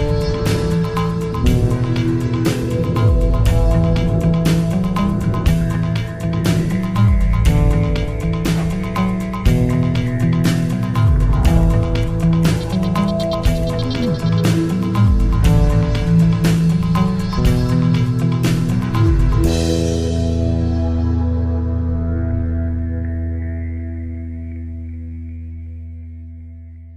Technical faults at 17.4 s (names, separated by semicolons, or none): none